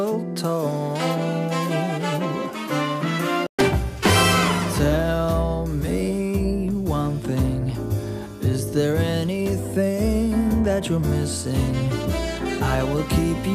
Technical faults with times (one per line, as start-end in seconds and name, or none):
3.46-3.59 playback stall